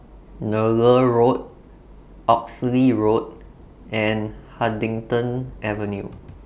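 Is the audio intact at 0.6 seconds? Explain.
Yes, at 0.6 seconds the speech runs intact, with no fault in the audio at that moment.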